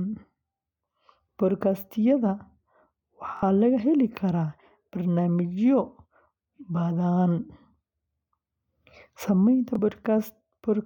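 Bluetooth stutter at 3.37 to 3.43 s and again at 9.75 to 9.79 s in this speech clip. Packets reached the receiver late or not at all, so it kept replaying its last slice of audio to fill the gap. The first gap loses about 46 ms, which fits two dropped frames of roughly 23 ms each and gives a brief buzzy double repeat. The second loses about 23 ms, a single repeated slice heard as a quick flutter. After each, the speech resumes further on, skipping the missing stretch.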